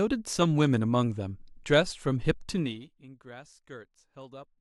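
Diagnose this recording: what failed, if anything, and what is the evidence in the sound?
The gain stage in the driver or buffer processing is the culprit. There's zipper noise from 2.50 to 2.92 s, where the level drops by around 20 dB in 1 dB steps. Each jump lands as a tiny click, and at about 50 steps a second they blur into a fine ticking that rides on the speech as it fades. The gain is being updated once per block with no ramping between values, which fits blocks of roughly 20 ms.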